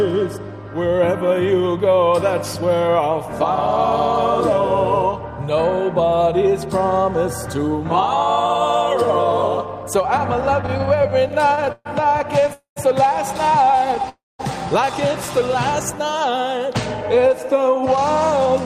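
Repeated stalls (stutter) run from 10.61 to 12.49 s. The audio keeps catching on itself 19 times, with the longest hold about 129 ms and roughly a third of a second stretched in all. Packets were arriving late or slower than playback, so the jitter buffer kept draining and the receiver extended the last sound each time. Nothing is lost, but the passage drags. A shorter burst of the same stutter follows at 13.91 to 14.05 s, with three tiny holds of up to 10 ms.

Two call audio freezes interrupt the flow, at 12.53 to 12.78 s and at 14.09 to 14.41 s. In each, the last sound is drawn out and fades away, leaving about 130 ms and then about 210 ms of silence before the audio resumes where it stopped. This adds 230 ms and 300 ms of delay. The likely cause is delayed packets emptying the jitter buffer, with concealment filling the wait.

A jitter buffer speed-up follows from 17.53 to 18.47 s. Playback runs at about 107% of normal speed, and some 70 ms is trimmed out as many small pitch-period-sized pieces. 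The pitch stays put while the timing hurries. The receiver is shedding the surplus audio held in its buffer to bring latency back down.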